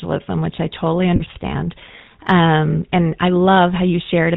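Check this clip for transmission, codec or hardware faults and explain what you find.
Two faults turn up: codec damage across the whole speech clip, and a brief dropout patched by frame repetition.

The GSM full-rate codec runs throughout, with damage that is plainly audible. It models the vocal tract and excites it with a sparse, regular pulse train, which fits the 13 kbps full-rate mode. Nothing above 4 kHz survives, so the voice sounds buzzy and gravelly.

Lost GSM frames occur from 1.16 to 1.23 s, right after "which I totally". The receiver reused the last good frame's parameters, which fits about 40 ms of missing audio, or two frames. This is heard as a short rough, metallic ring.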